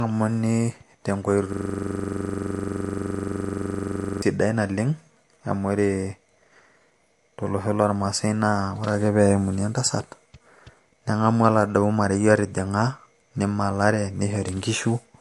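Throughout the speech, the treble stops dead at 11.3 kHz, and what remains has a watery, swirling edge with chirpy, metallic sibilants and softened consonant attacks. The likely cause is MP3 compression at a low bitrate, something like 48 kbps. Starved of bits, the encoder cut everything above a fixed frequency and dropped quieter spectral detail, letting it flicker in and out from frame to frame.

From 1.53 s to 4.22 s, a system hang loop takes over. The computer or driver froze while the audio hardware kept replaying one ring buffer. A 42.67 ms slice, which fits a 2048-sample buffer, repeats over sixty times at 23.4 Hz. Because the fragment is so short, it sounds like a steady rough buzz at that rate rather than recognisable speech.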